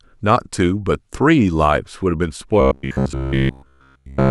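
Speech, with robotic sound from repeated short buffers from 2.61 s to 4.30 s. The likely cause is that fresh audio stopped arriving in time, so the playback side kept looping the last short buffer while the real signal was skipped. Essentially all of that stretch is repeated material, and the loop imposes a fixed buzz at 66.7 Hz, which fits a 15 ms buffer. The speech becomes a rigid, metallic drone that only roughly tracks the talking.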